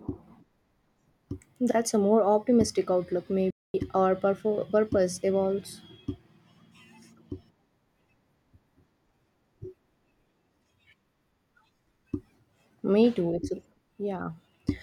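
At 3.50 s, right after "a more optimistic outlook", the speech drops out abruptly mid-flow and the output sits in dead silence for about 236 ms, until 3.74 s, before the talking resumes. This is a playback stall: the break sounds like the audio simply freezing rather than a pause in delivery. The likely cause is the player running short of buffered data, or its audio thread being blocked, so nothing reached the output until it recovered.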